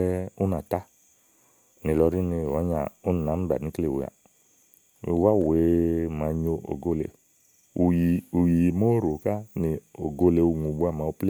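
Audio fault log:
No technical faults can be heard anywhere in this speech recording.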